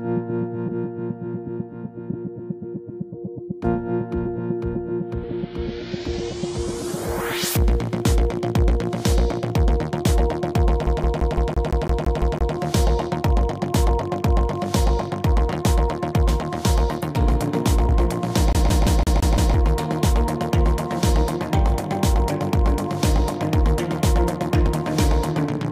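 The audio has two kinds of fault. Compressed frames are skipped at 0.68, 2.12, 5.23, 15.51 and 17.88 s. At each point the decoder drops whole frames of roughly 23.2 ms, so the sound jumps ahead. The jumps are about three frames (around 70 ms) at 0.68 and 5.23 s, about four frames (around 100 ms) at 2.12 and 15.51 s, and about fifteen frames (around 300 ms) at 17.88 s. On a waveform the envelope changes abruptly, and a spectrogram shows a vertical seam where the texture fails to continue. A second fault sounds like a CD stuck on one turn, from 10.86 to 12.55 s and again from 18.53 to 19.54 s. A scratch keeps throwing the pickup back, so a 169 ms slice replays ten times in the first stretch and six times in the second. Each jump is marked by a brief mute, which gives the rapid, even stutter of a skipping disc. A waveform shows identical blocks repeating at 169 ms intervals with tiny gaps between them. 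A spectrogram shows the same short pattern tiled across the span, separated by thin silent columns.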